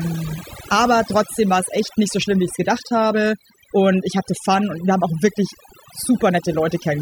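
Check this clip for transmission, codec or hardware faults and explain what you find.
The only fault is overdone noise removal, present throughout. An over-aggressive noise reducer switches off individual frequency bands near its noise estimate, so the background drops and breaks up into twinkling specks. Unlike codec artefacts, the damage follows the noise floor, not the bitrate.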